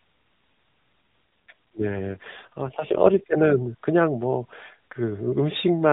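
From 1.49 s to 3.23 s the speech turns rougher and more synthetic, with a buzzy, mechanical edge, and then clears again. There is no gap and no loss of high end during this stretch. This is an AMR rate drop: the mobile link forced the narrowband AMR codec down, which fits a shift from about 12.2 kbps to 5.9 kbps. At that rate the codec has fewer pulses per frame to model the voice, so the sound turns synthetic until the rate recovers.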